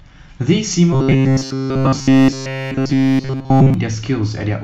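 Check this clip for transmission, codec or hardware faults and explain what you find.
One fault stands out: robotic sound from repeated short buffers, from 0.93 to 3.74 s. Across that whole stretch the speech turns into a rigid, metallic buzz pitched at 133 Hz that only roughly tracks the syllables. The likely cause is audio arriving too seldom, so a segment of about 7.5 ms is looped in place of the missing signal. The waveform shows an identical short cycle repeating, and the spectrogram shows flat harmonics stacked on 133 Hz.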